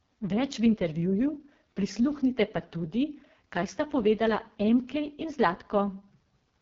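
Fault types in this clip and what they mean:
AMR wideband (HD Voice) codec: throughout the speech the sound is rough and raspy, the heavy damage of AMR-WB at its lowest rate, which fits about 6.6 kbit/s. At that rate the codec rebuilds the voice from a vocal tract model driven by a sparse set of pulses, and too few bits reach the excitation, so the grain becomes audible. Above 6.4 kHz it supplies only shaped noise, and nothing is heard above about 7.4 kHz.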